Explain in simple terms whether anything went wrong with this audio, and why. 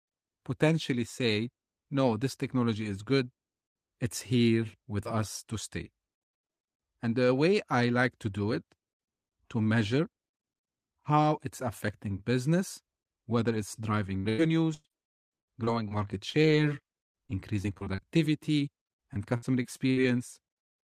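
Something did go wrong, toward the end of this speech clip. Parts of the call's audio arrived late or not at all, and you can hear it in two ways.

The first is repeated packet loss, which gives that robotic sound. Between 14.17 and 15.93 s there are 11 small holes, about half a second missing in total. The same thing happens from 17.04 to 18.00 s (8 holes) and from 18.96 to 19.99 s (6 holes). Each time, the receiver patched a hole by carrying the last sound forward, and then the next hole came along. The result is choppy speech with pieces missing.

The second is short concealed packet loss, around 16.31 to 16.47 s. About 40 ms of audio went missing there, with a second 20 ms gap inside that stretch. The receiver filled these gaps by extending the previous sound, using its pitch or shaped noise depending on the sound, and then blended back in. That bit also ran roughly 15 ms long. You hear it as a quick smear.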